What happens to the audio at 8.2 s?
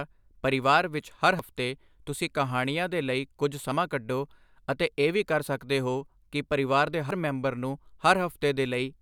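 Nothing goes wrong at 8.2 s: the speech carries on intact there, with no dropout, click, distortion or other fault at that moment.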